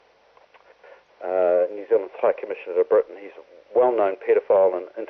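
No technical faults are audible.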